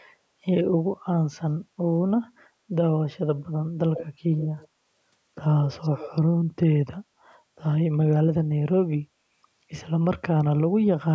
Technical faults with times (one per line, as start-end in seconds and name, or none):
3.94-4.07 echo leak
4.38-4.68 echo leak
5.68-6.11 echo leak